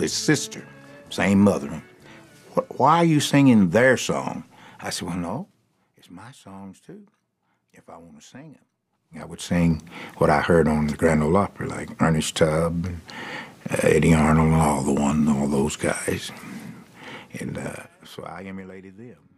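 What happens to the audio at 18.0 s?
At 18.0 s the sound is in the middle of a burst of zipper noise running from 17.65 to 18.76 s. The level falls by roughly 25 dB in unsmoothed 2 dB jumps, about ten a second, and each jump leaves a small click, so a fast ticking rides on the fade. The waveform envelope shows a staircase instead of a slope, and a spectrogram shows faint broadband vertical lines at each step.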